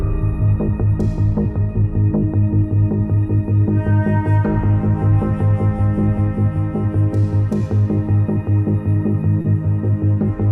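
A faint unevenness runs through the whole clip, as if the pacing can't quite settle, with tiny hiccups arriving at irregular moments rather than on any beat. That is clock drift between sender and receiver. The sending side's audio clock runs roughly 2% slow relative to the receiver's, so samples arrive a little more slowly than they are played out. The jitter buffer keeps trending toward empty, and the receiver has to compensate continuously instead of just once.

From 0.14 s to 8.96 s the sound drags slightly, running at 98% speed, with small stutters where brief fragments seem to recur. These are repeated timing corrections. Because data keeps arriving too slowly, the receiver repeatedly duplicates short slivers of audio to keep the buffer from draining. Every edit lengthens the audio, always in the same direction but at uneven spacing. Together they add roughly a fifth of a second, heard as a loose, slightly sluggish tempo more than any single obvious glitch.

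At 9.41 s one sound hangs on a beat too long, with a faint buzzy sustain before the audio picks up again exactly where it left off. This is a short stall from a late packet. The expected packet hadn't arrived, so the jitter buffer briefly ran dry. The receiver stretched the last sound across 30 ms until the data turned up, then resumed with nothing lost. The stall left playback 30 ms later than before.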